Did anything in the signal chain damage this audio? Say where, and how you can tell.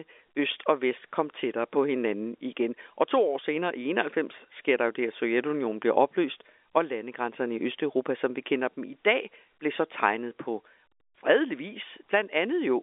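No, nothing in the signal chain damaged this audio.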